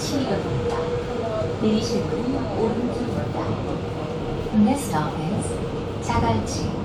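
Nothing technically wrong turns up in this recording of sounds, so there are no faults to point to here.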